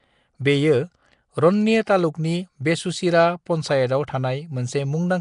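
Throughout the speech there is a rough, hissy halo and a smeared, underwater quality, with nothing above 10.6 kHz: Nellymoser compression is the likely cause. A fixed, small bit budget leaves weak bands unfunded and filled with noise, so a spectrogram shows a hard ceiling and speckled noise between harmonics.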